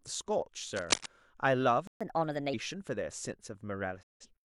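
A worn cable, connector or control was likely disturbed between 0.76 and 1.07 s, its contact resistance jumping about rapidly. The result is cable scratch noise: a rough, uneven burst of scratching laid over the speech, roughly as loud as the voice itself for that moment.

At 1.87 s the player stalls, likely because it ran out of data or its thread was held up. The speech halts mid-flow and the output sits silent for about 133 ms before resuming at 2.01 s where it broke off.

From 2.01 to 2.54 s comes catch-up at higher speed: the player resamples its backlog to regain the lost time, running at 1.25 times normal speed. The speech is audibly hurried and raised by about four semitones, then settles back to normal pitch and pace.

At 4.02 s a digital broadcast dropout occurs. The receiver lost valid frames and muted, fading out over 8 ms into a hole of about 170 ms, which fits four lost frames. 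The speech returns at 4.26 s, with the missing stretch simply gone.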